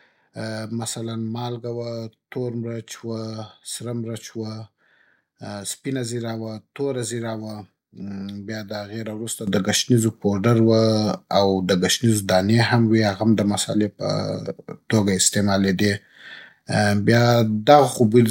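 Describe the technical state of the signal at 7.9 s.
At 7.9 s the speech signal is intact, with no audible technical fault at that moment.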